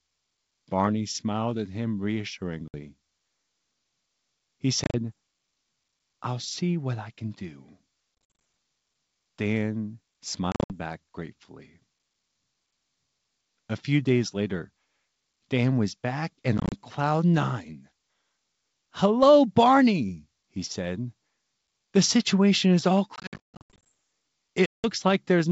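You get packet loss on an ADPCM call seven times over this wideband G.722-sounding speech. The gaps come at 2.68–2.75 s, 4.84–4.95 s, 8.35–8.39 s just after "what I can do", 10.52–10.74 s right before "back gratefully", 16.58–16.73 s, 23.16–23.87 s after "situation is all", and 24.66–24.86 s. The longest is around 23.2 s, with roughly half a second gone in chopped bursts up to 140 ms. Each dropout is a hard silent hole. Because the receiver's adaptive predictor and step size drift from the sender's, the sound comes back slightly distorted before it settles.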